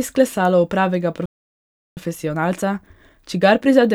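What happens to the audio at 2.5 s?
At 2.5 s you're inside a stretch of time-compressed catch-up that starts at about 1.97 s and runs right to the end of the clip. The player is working through a backlog after a stall, snipping out tiny slices and cross-fading over the joins, so the speech plays roughly 1.1 times faster. Pitch stays where it should be, but the delivery sounds a bit rushed.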